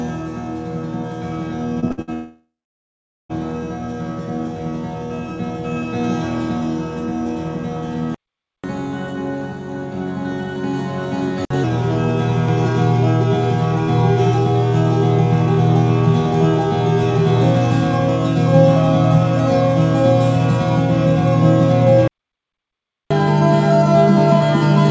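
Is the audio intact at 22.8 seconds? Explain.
No. At 22.8 seconds the audio is in the middle of a playback stall running from 22.08 to 23.11 s, about 1.03 s in all. The player most likely ran short of buffered data or had its output thread held up, so nothing reached the output until it recovered. The sound cuts off abruptly in mid-flow, leaving a full second of dead silence, then resumes, with the same band-limited G.722 character, topping out at 8 kHz, on either side of the gap.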